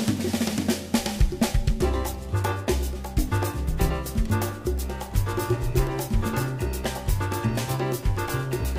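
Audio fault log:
No audible faults were detected in this clip.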